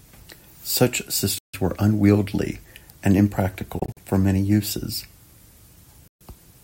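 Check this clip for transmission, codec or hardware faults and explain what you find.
The speech has three abrupt silent gaps that are likely Bluetooth dropouts. They fall at 1.38 to 1.54 s, losing about 149 ms; at 3.79 to 3.98 s, with about 85 ms lost in short holes spread over 171 ms, the longest 43 ms; and at 6.08 to 6.22 s, losing 128 ms. Packets that arrive late or not at all leave the output muted, and the speech then resumes further on, as though it had kept playing through each gap.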